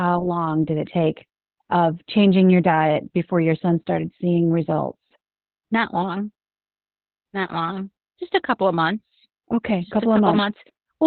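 Opus voice compression runs throughout this speech clip, cutting everything above 4.3 kHz and leaving it muffled, hoarse and robotic, which points to narrowband SILK coding at about 8 kbps.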